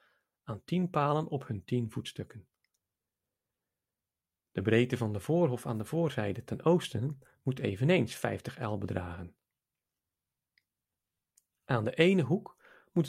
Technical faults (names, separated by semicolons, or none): none